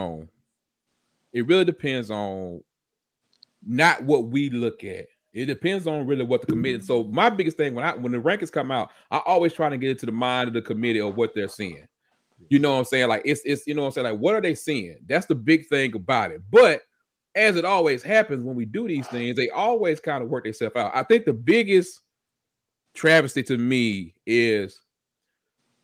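Speech recording with no technical faults to report.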